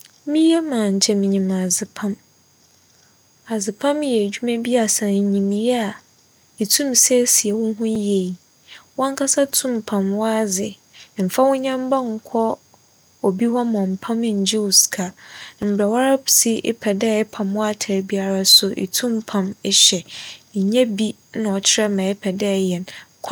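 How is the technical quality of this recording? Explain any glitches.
The speech has two brief dropouts. At 7.95 s and 15.62 s, a block of digital silence of about 3.5 ms and 5 ms drops the signal abruptly to silence, likely from an unfilled output buffer, giving a tick: a flat waveform gap with vertical broadband streaks.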